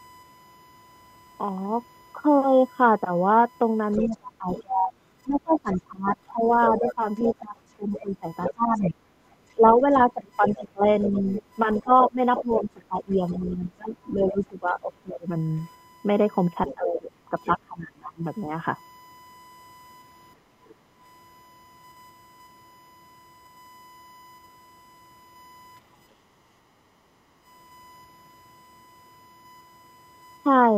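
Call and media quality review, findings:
USB whine: steady 1 kHz tone across the whole clip, sitting about 30 dB under the speech. Fixed pitch points to USB 1 ms frame current leaking into the mic path via power or ground. Check cabling, grounding, or try another port.

Other side's voice leaking through: far-end voice audible 3.92–12.65 s at about 10 dB below the talker, again 16.66–17.46 s at about 15 dB down, plus a faint scrap at 20.68–20.75 s near 35 dB down. Likely speakerphone playback the echo canceller didn't fully remove.

Speech suppressed in double talk: talker dips and chops between 4.06 and 18.23 s, roughly 7 s affected in total, deepest drops around 25 dB. Likely the echo canceller ducking everything while both sides overlap, unable to tell near speech from echo.

Background gated by the echo canceller: room tone pumps down about 8 dB at 20.36–20.99 s (about half a second) and about 9 dB at 26.14–27.45 s (about 1.5 s). 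Canceller clamps the mic while the loudspeaker plays, then releases.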